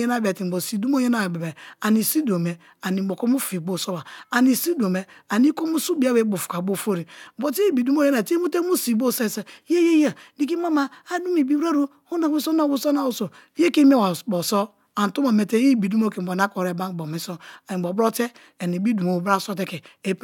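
No dropouts, clipping, distortion or timing errors turn up anywhere in the recording.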